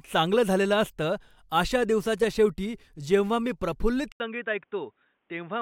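The input likely switched to a poorer device at 4.12 s: after a brief gap of about 80 ms, the speech runs to the end band-limited with nothing above 3.8 kHz, sounding dull and boxy, a little quieter, over a faint new background noise.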